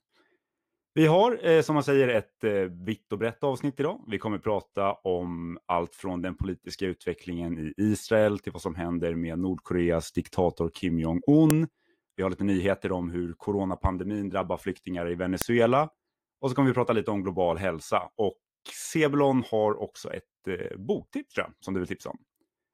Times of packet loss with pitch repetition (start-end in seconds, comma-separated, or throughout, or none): none